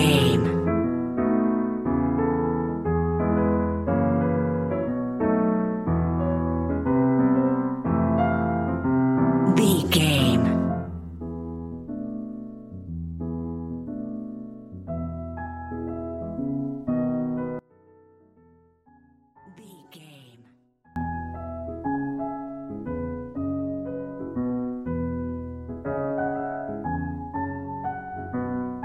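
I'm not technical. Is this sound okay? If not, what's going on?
No. From 17.59 to 20.96 s the sound almost disappears, leaving only a faint trace. The likely cause is one channel inverted, so the two sides cancel when combined.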